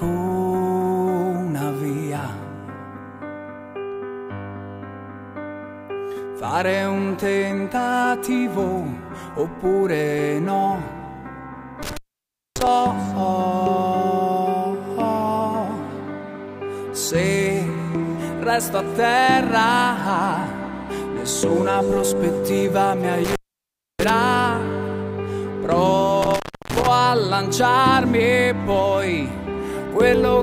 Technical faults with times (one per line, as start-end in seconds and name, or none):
11.83-12.67 intermittent contact
23.24-24.10 intermittent contact
26.22-26.87 intermittent contact